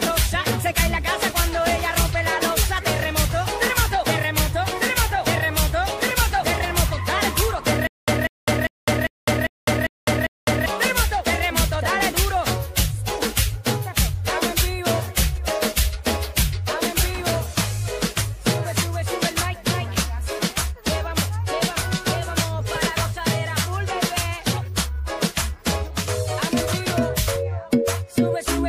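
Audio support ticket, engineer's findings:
Stutter with silent gaps, 7.87 to 10.66 s. A 192 ms fragment repeats seven times, each followed by 207 ms of digital silence, a 399 ms cycle. Likely a stalled player or stream replaying its last buffer on each retry. Audio for that span is lost.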